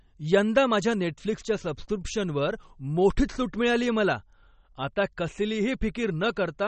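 Throughout the speech, the likely cause is MP3 compression that ran short of bits, which fits a bitrate near 32 kbps. The encoder removed everything above 8.4 kHz and let weak frequency lines switch on and off, leaving a dull, watery, swirling sound with smeared attacks.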